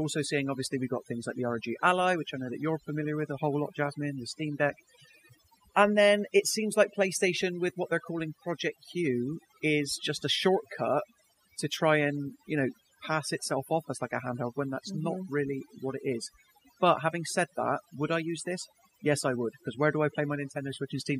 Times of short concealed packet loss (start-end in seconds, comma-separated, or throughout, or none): none